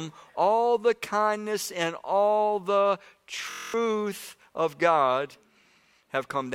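Speech, interrupted by a system hang loop from 3.51 to 3.74 s. The computer or audio driver stalled, and the sound hardware kept replaying the same small ring buffer instead of receiving new data. A 23.22 ms slice of audio repeats exactly ten times. That loop length fits a 1024-sample buffer. At 43.1 repeats per second, the slice fuses into a steady, rough low buzz, and about a fifth of a second of the real speech is lost.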